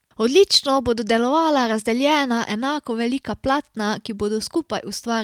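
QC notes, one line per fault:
No faults to note for QC.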